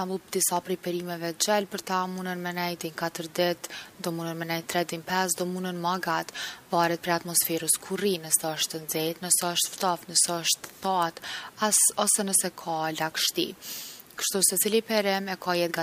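Sharp isolated snaps at 0.57 s and 10.27 s, the second a bit louder, sit on the speech: likely an electrical switching spike picked up nearby.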